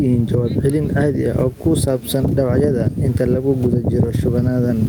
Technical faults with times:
0.00-4.88 gain pumping

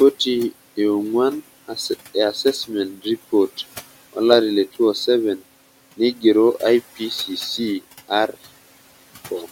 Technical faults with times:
0.00-9.52 noise suppressor artifacts
2.93-3.06 speech cut by the noise suppressor
5.97-6.24 speech cut by the noise suppressor

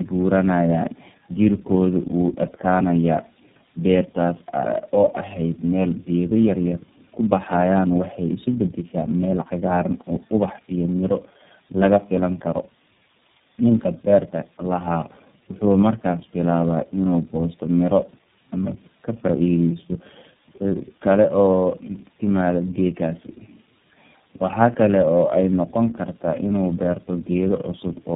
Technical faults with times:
0.00-28.15 tandem speech coding

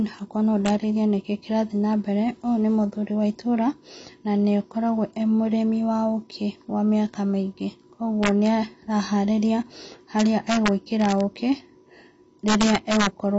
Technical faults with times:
0.00-13.39 AAC compression
0.66-0.70 integer overflow
8.23-8.47 integer overflow
10.19-11.12 integer overflow
12.48-13.07 integer overflow

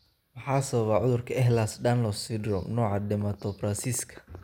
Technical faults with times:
2.86-4.36 train of clicks

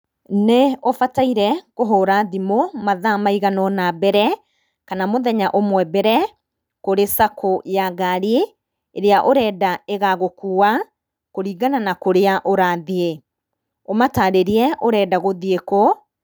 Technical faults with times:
none

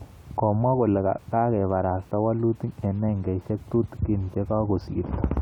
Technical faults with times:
none

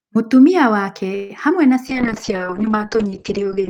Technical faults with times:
1.15-1.31 call audio freeze
1.49-1.52 short concealed packet loss
1.90-3.70 call bitrate drop

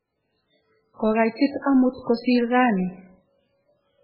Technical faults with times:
0.00-4.04 MP3 compression

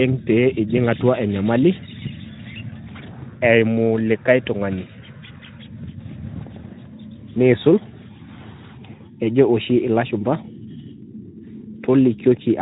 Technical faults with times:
none

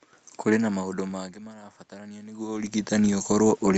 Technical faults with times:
0.72-2.81 automatic gain rising

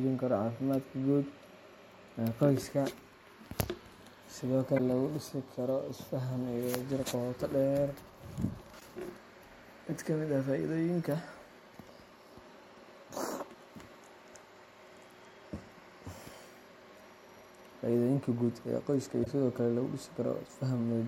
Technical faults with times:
4.74-4.80 damaged data in a compressed stream
8.77-8.82 damaged data in a compressed stream
16.50-16.55 damaged data in a compressed stream
19.21-19.27 damaged data in a compressed stream

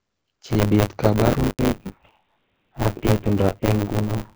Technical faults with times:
0.00-4.35 buffer tearing
1.49-1.59 handover gap
1.59-4.35 fallback to narrowband

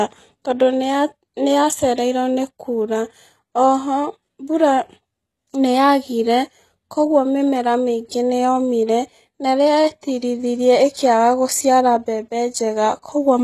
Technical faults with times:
0.00-13.43 HE-AAC compression
10.01 pre-echo

